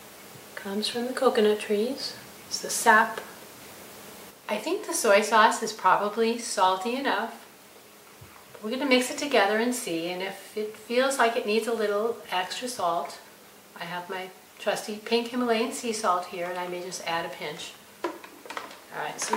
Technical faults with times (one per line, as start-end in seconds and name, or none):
none